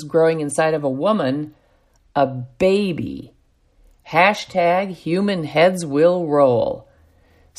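No technical faults can be heard anywhere in this recording.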